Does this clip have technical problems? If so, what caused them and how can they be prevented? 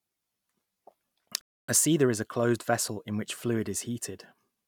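Yes. Speech cuts to silence from 1.41 to 1.69 s: likely a Bluetooth stall, the headphone buffer running dry while delayed packets were resent. Keep devices close and away from interference.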